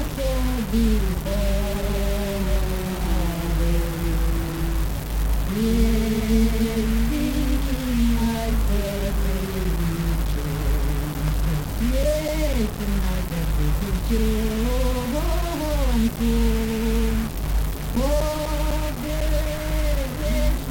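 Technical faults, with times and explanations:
Throughout, mains buzz: a steady, raspy buzz sits about 25 dB below the signal, built on 60 Hz and its harmonics reaching into the kilohertz range. Sharp switching spikes, twice per mains cycle, leak in through a dimmer, rectifier or missing shield.
Throughout, low bit depth without dither: grainy distortion follows the sound, with quantisation error roughly 15 dB below the signal, and quiet passages turn gritty or sputter. This likely comes from rounding to about 4 bits with no dither, so the error tracks the signal.
11.28 to 13.28 s and 16.96 to 20.21 s, CD scratch ticks: regular ticks and tiny dropouts, nine in the first run and fourteen in the second, the longest around 7 ms and 10 ms. A scratch defeats error correction once per disc turn, and the player interpolates or mutes the damaged samples.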